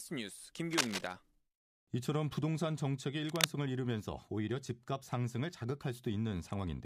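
From 0.73 to 1.13 s, and again from 3.25 to 3.46 s, bursts of cable scratch noise break through the speech: a ragged scratching and rustling, roughly level with the voice in the first burst and somewhat louder than it in the second. The likely cause is a worn cable or connector being moved, its contact resistance flickering rapidly. A spectrogram would show dense, broadband vertical streaks, and the waveform would show irregular spiky clusters.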